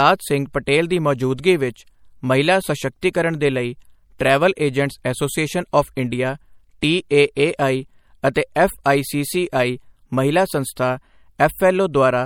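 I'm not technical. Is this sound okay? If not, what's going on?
No. The speech has a watery, swirly quality throughout, with the s sounds turning metallic and chirpy. That points to likely MP3 compression squeezed too hard. Unlike simple muffling, which just dulls the sound evenly, the faint details here flicker on and off.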